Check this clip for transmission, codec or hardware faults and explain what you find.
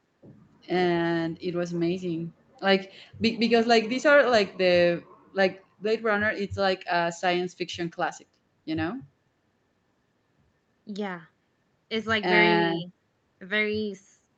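Nothing here points to a transmission, codec or hardware fault: the speech comes through the call's microphone processing and an Opus call path as you'd expect, with the top end stopping at about 8 kHz.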